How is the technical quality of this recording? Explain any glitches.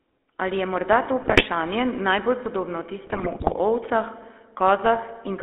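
The quality is pretty rough. This is a narrowband phone call with audible codec damage and two bursts of channel corruption.

The whole clip runs through the GSM full-rate codec. The sound is squeezed into roughly 250 Hz to 3.5 kHz. The codec rebuilds the voice from a vocal-tract filter fed by a coarse, regularly spaced pulse excitation, which fits 13 kbps coding. That's where the constant buzzy, gravelly edge comes from.

Then there are two patches of GSM bit errors: from 1.22 to 1.44 s, right after "je morda to", and from 3.05 to 3.55 s, following "najbolj podobno". Corrupted bits scramble the decoder's filter, pitch and gain values frame by frame, so the speech warps into gargly squawks and pops. The second burst is longer and worse.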